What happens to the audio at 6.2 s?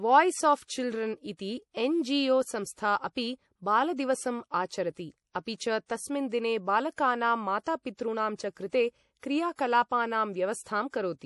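At 6.2 s the speech is going through the same likely MP3 compression that runs through the whole clip, and the damage is plainly audible. Short of bits, the encoder has cut everything above 11.5 kHz and dropped weak frequency lines that flicker on and off from frame to frame, which suggests a bitrate around 48 kbps. The result is dull treble, a watery, swirly texture, metallic chirps on s sounds, and smeared attacks.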